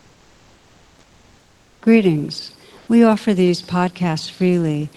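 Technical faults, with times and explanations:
0.00 to 1.81 s and 2.77 to 2.87 s: comfort noise in place of the background. In both pauses the real room noise gives way to a steady, featureless hiss. The first stretch lasts about 1.8 s. The second lasts only 0.1 s. The hiss sits about 40 dB below the loud parts. Its level is about 1 dB lower in the first gap and about 1 dB higher in the second. The likely cause is Opus discontinuous transmission: the sender goes quiet when no speech is detected, and the receiver fills the gap with synthetic noise. The call path itself keeps content up to about 12 kHz, which fits a low-bitrate Opus setting.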